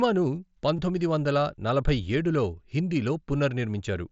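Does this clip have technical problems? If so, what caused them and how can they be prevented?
Yes. Concealed Bluetooth headset packet loss struck at 0.76 to 0.79 s. About 22 ms of voice packets never reached the phone, so it patched the gap with a copied stretch of recent waveform, giving a brief buzzy hold and a slight warble. Keeping the phone near the headset, away from 2.4 GHz interference, prevents it.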